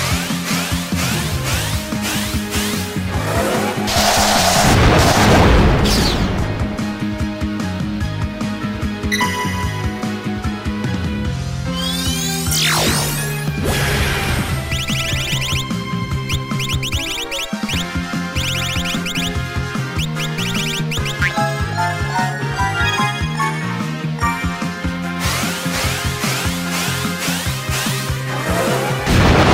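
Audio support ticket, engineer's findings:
Sample clock jitter throughout: signal-dependent hiss and roughness, worst on loud, bright passages, gone in silence. Converter clock unstable by a few microseconds; error sits about 30 dB below signal.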